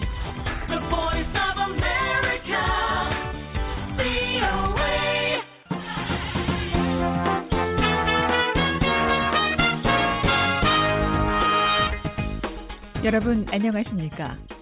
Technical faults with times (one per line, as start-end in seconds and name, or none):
none